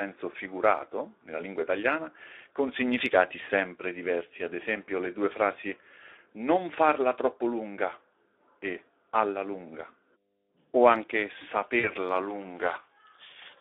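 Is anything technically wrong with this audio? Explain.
Yes, three faults are audible in this speech clip.

Mains hum runs throughout: a steady 50 Hz tone, roughly 30 dB below the speech, from power-line leakage such as a ground loop.

Speex codec damage is heard throughout. This low-rate CELP coder, which sounds like about 11 kbps, leaves the voice plainly hoarse and noisy within a 300 Hz to 3.6 kHz line band.

VoIP packet loss concealed by the speech codec occurs from 11.79 to 11.94 s, just after "o anche". The decoder bridged a 40 ms gap, fitting two 20 ms frames, by extrapolating and fading its last pitch, leaving a stretched, fading stretch with the voice weakened after it.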